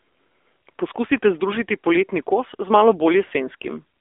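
AMR narrowband mobile codec, present throughout: nothing above 3.6 kHz survives, and the speech sits in a 300 Hz to 3.5 kHz telephone band. Pulse-driven vocal-tract modelling leaves it plainly buzzy and synthetic, which fits a low mode around 7.4 kbps.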